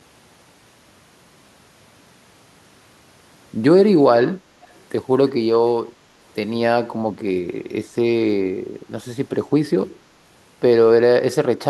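From 4.63 to 4.77 s, a brief echo leak surfaces: a faint, delayed copy of the speech, trailing the original by about 353 ms and sitting roughly 35 dB below it. The likely cause is a far-end loudspeaker whose sound reached its microphone and was not fully removed by the echo canceller, so a residual scrap was sent back into the call.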